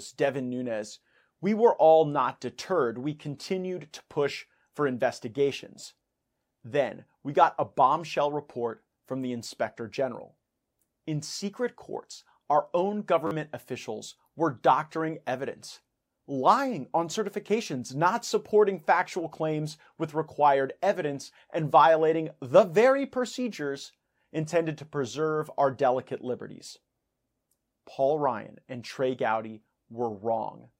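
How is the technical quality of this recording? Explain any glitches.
One glitch stands out, a repeated buffer at 13.27 to 13.31 s, between "secret courts our own" and "officials were doctoring evidence". Fresh audio arrived late, so the device replayed one tiny chunk several times, losing around 40 ms and producing a brief buzz that fits a roughly 10 ms buffer.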